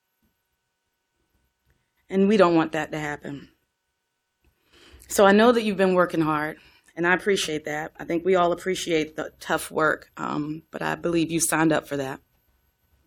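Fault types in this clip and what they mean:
Clock slip clicks, 0.13 to 13.03 s: faint, evenly spaced ticks, roughly twenty a second, run under the speech as a soft rattle. The likely cause is two unsynchronised clocks about 500 ppm apart, each slip dropping or repeating one sample.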